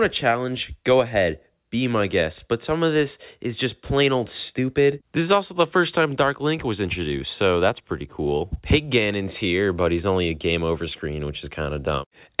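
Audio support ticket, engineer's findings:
No faults found in the clip. The call path behaves as a narrowband telephone codec would, with nothing above 4 kHz, which fits G.711 mu-law at 64 kbps.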